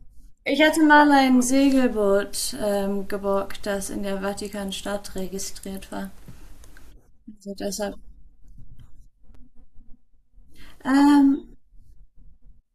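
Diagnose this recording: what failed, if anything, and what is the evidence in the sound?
Driver or buffer stage: a 5.8 ms block of digital silence at 9.35 s, fitting a 256-sample buffer underrun. Its unfaded edges make it a tick or dip, unlike smoothed network loss.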